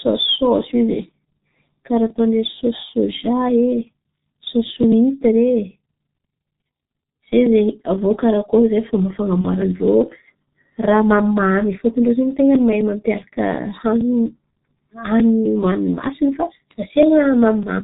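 From the start, the speech carries the heavy damage of the G.723.1 codec. It sounds muffled and hoarse, which fits a low-rate stream near 6.3 kbit/s. Nothing survives above 4 kHz, leaving a flat ceiling on the spectrogram, while consonants smear across the coarse 30 ms frames.

At 9.41 to 9.47 s, VoIP packet loss concealed by the speech codec bridges a gap that fits one lost 30 ms frame. The decoder repeats its last pitch and filter at falling gain, producing a brief stretched sound that fades, with a shrinking waveform envelope.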